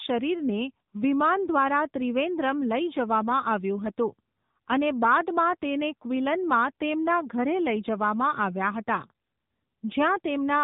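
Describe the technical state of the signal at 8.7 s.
At 8.7 s the speech is still under the AMR narrowband mobile codec running the whole clip, at 7.95 kbps: nothing above 4 kHz, and a plainly buzzy, synthetic, modelled-voice quality.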